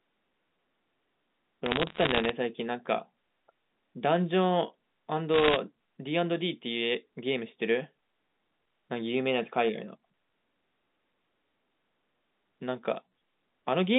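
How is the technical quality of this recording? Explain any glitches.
Two short bursts of crackle mar the recording; the rest of the clip carries the narrow 200 Hz to 3.7 kHz band of a G.711 A-law telephone line.

The glitches, from 1.66 to 2.29 s and from 5.34 to 5.57 s, are bit errors on a digital phone line. Flipped bits corrupt individual 8-bit samples, and a hit on a high-order bit or on the sign of a loud sample throws one sample far off, giving a sharp tick. The first burst sounds like an error rate just under one percent. The second is denser, around one and a half percent, so its crackle is thicker. Unlike packet loss, the speech underneath never drops out or stutters. Only isolated clicks ride on top.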